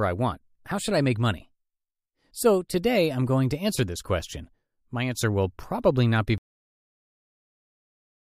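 At 6.38 s the speech stops dead mid-sound and falls straight to digital silence, with no decay, for the remainder of the clip. This is a cut-off end: the final buffers of audio were never written out or played back.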